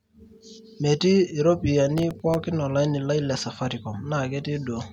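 From 1.98 s to 2.35 s the speech carries a burst of processor overload crackle, a gritty tearing laid over the sound. The processor repeatedly failed to deliver its very short buffers, around a millisecond and a half each, in time, and each miss was filled by repeating stale audio with abrupt joins. Several such misses cluster here. A waveform shows small discontinuities scattered through that span, and a spectrogram shows thin vertical broadband streaks.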